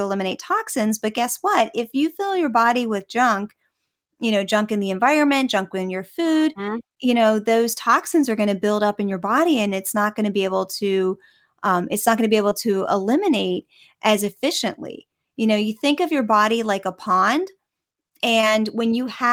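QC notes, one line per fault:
12.49–12.53 s and 18.41–18.45 s, short concealed packet loss. Each time, 20 ms of audio never reached the decoder in time. The receiver covered the gap, with 14 ms filled at the first and 18 ms at the second. It extended the preceding sound, as pitched sound or shaped noise, then blended back into real audio. That patch is heard as a brief smear or wobble. The first falls between "not going to be" and "to eliminate as efficiently".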